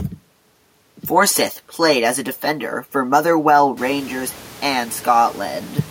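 Nothing here points to a system fault: the room's own background noise swells by about 19 dB from around 4 s, but it still sits about 23 dB beneath the speech and belongs to the space the microphone was in rather than to anything going wrong.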